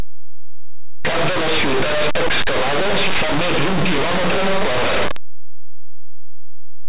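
Linear audio read as companded, present from the first moment to the last: the speech was written as plain linear 8-bit samples but decoded as mu-law codes. Expansion treats each byte as a logarithmic code, so samples sitting just to one side of zero leap to the loudest outputs while their neighbours on the other side stay tiny. The result is a very loud, harsh distortion over the whole clip.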